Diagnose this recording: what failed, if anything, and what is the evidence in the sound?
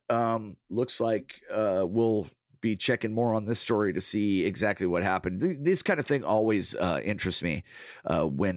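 Nothing failed: the speech carries the narrowband sound of a call path with no content above 4 kHz, consistent with G.711 mu-law at 64 kbps, and the microphone processing's bass roll-off is in place, with no dropouts, clicks, distortion or timing errors anywhere in the recording.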